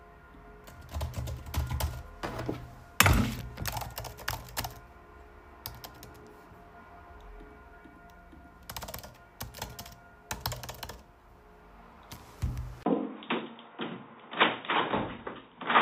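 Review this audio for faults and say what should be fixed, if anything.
At 12.83 s the sound goes dull and slightly quieter, about 5 dB down, after a 20 ms gap, and stays that way to the end. This is likely an input switched to a poorer device: nothing above 3.8 kHz gets through, and a new, faint noise floor appears. On a spectrogram the upper band goes empty from that point. The waveform shows a brief flat gap, then smaller amplitude. Lock the recording input so the system cannot hand off to another microphone or headset profile mid-take.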